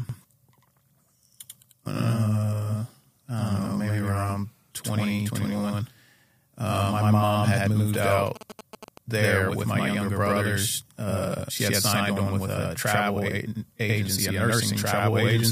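From the start, the speech carries a channel delay (doubling): one channel runs about 92.9 ms late, which fits a 4096-sample buffer, and the mono sum holds both copies. Each syllable gets an equal-level slap echo, and the waveform shows every onset repeated 92.9 ms later.

Between 7.94 and 8.89 s, GSM signalling bursts break in. A nearby 2G phone's radio bursts are rectified by the audio circuit, giving a galloping dit-dit-dit of short 217 Hz buzzes roughly 10 dB below the speech. On a spectrogram they appear as a comb of harmonics at 217 Hz spacing, chopped into short vertical blocks.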